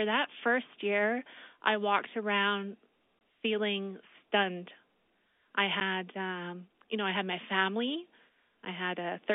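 Speech carried over a narrowband telephone path in G.711 coding has three short dropouts from packet loss filled with silence. A 20 ms hole runs from 3.19 to 3.21 s between "year I walked around" and "feeling stunned", a 10 ms hole falls at 5.80 s just before "um you know I", and another 10 ms hole comes at 8.65 s right after "I had my family". Each gap is abrupt with hard edges, and the lengths fit 10 ms packets, with two consecutive packets lost in the first gap.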